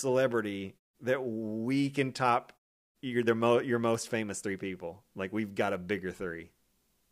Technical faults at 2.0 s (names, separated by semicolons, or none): none